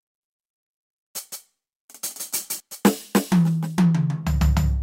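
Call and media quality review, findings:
Doubled audio track on the music, 1.32 to 2.60 s: second full-band copy trailing by about 150 ms, about 5 dB down, dry with no room tail, cutting in and out abruptly. Likely a slower capture path or edit stacking two out-of-step copies.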